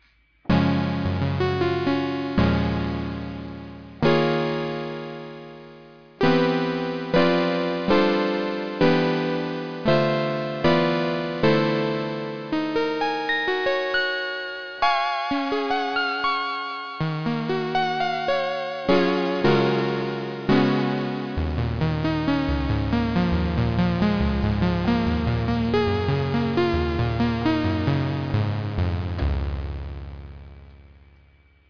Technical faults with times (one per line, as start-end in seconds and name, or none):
none